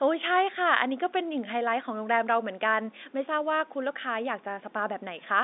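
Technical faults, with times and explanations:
No technical faults are audible; the speech carries the ordinary narrowband character of a G.711 telephone line, confined to roughly 250 Hz to 3.7 kHz, after normal call microphone processing.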